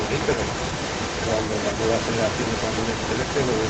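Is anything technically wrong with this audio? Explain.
Yes. An echo leak runs through the whole clip, from 0 to about 3.7 s: a delayed copy of the speech trails the original by roughly 0.36 s, only a few decibels quieter. The likely cause is a loudspeaker on the far end whose echo canceller let part of its microphone pickup return down the line. On a spectrogram, speech patterns repeat about 5 dB weaker about 0.36 s later.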